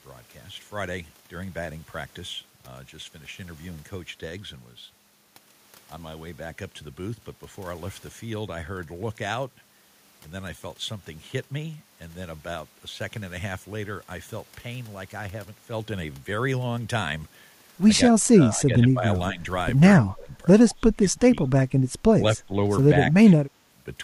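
From 18.1 to 19.45 s, and again at 20.06–20.33, 20.69–21.37, 21.65–21.7 and 22.21–22.55 s, the speech sinks by roughly 10 to 30 dB in ragged pieces. This is speech suppressed in double talk, likely an echo canceller muting this side while the far side talks. At 20.69–20.75 s, a faint echo leak sits about 30 dB below the speech, a copy delayed by 168 ms, likely loudspeaker echo that escaped cancellation. Its distinct delay sets it apart from room reverberation.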